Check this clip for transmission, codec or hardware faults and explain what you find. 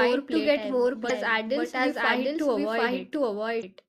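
Two problems turn up here. Throughout the speech there's a doubled audio track: a second, equally loud copy trails the original by about 0.7 s, clean and dry, most likely from a slower capture path recording it again. Then at 3.59 to 3.64 s there's damaged data in a compressed stream: the decoder hits corrupted frames, loses sync, and spits out a short chirp, squawk, click or gap while it hunts for the next header.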